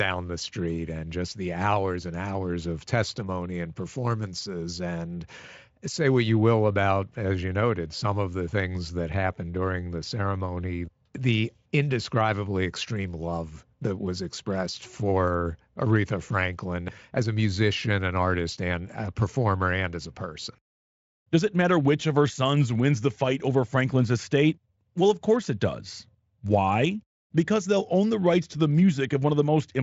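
No technical faults can be heard in this speech. It has been carried through a Speex codec at what sounds like a high-rate setting, and nothing is present above 7.7 kHz.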